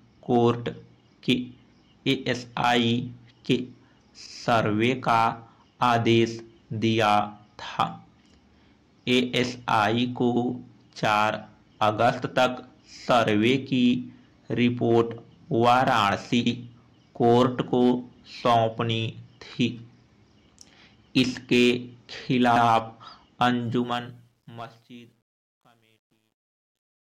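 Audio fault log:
10.36 s and 16.46 s, overlapping chunks: at each point about 100 ms of audio plays twice, heard as a brief stutter with a click at the seam. The two joins are about 6 s apart, which points to the audio being handled in 6-second chunks where each new chunk starts slightly before the previous one ended. A dropout or gap would remove material; here nothing is missing and the short passage repeats instead, always at the same regular interval.
23.63 s to 27.18 s, truncation distortion on a fade: the fade-out that begins around 23.6 s slides down smoothly at first, then turns gritty and grainy as the level falls. From about 24.83 s the grit is at its worst. This points to the fade being calculated at roughly 10-bit resolution without dither, so the quietest parts of the waveform collapse into a few coarse steps. Unlike steady hiss or background noise, the roughness follows the signal and gets worse as the level drops.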